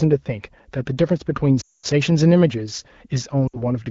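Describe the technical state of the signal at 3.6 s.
At 3.6 s the audio is inside a run of lost AMR speech frames spanning 3.48 to 3.66 s. About 60 ms of coded speech never decoded cleanly, consistent with three consecutive 20 ms frames. The wideband decoder fills the gap by repeating the last good pitch and vocal-tract settings at shrinking gain, so the sound fades to near silence within two frames rather than dropping to a hard digital silence. Speech returns briefly thin or rough.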